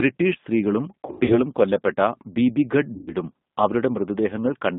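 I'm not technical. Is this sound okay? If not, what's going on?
No. The whole recording sounds thin, slightly rough and robotic, like a cheap phone line. That is the G.729 codec, which squeezes speech into very little data and drops the higher tones.

At 1.06 to 1.42 s, just before "കൊല്ലപ്പെട്ട ബീബീഗഢ്", and again at 2.95 to 3.14 s, right after those words, the speech smears into a buzzy or noisy, fading blur. This is VoIP packet loss concealed by the speech codec: chunks of the call went missing, and the decoder stretched out the last sound it had to fill the gaps.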